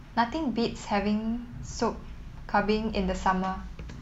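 A speech clip with video or display buzz running the whole way through. A low buzz sits at 50 Hz, the field rate of a picture signal. Hash rides above it. A faint, very high tone near 15.6 kHz is also present, matching the line rate. Together they point to a screen or video cable coupling into the audio path. The interference stays roughly 40 dB below the speech, so it is quiet but constant.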